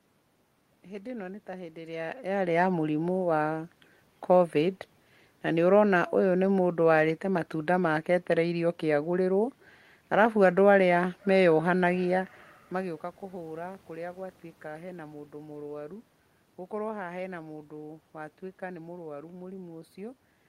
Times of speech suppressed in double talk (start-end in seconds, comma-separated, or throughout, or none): none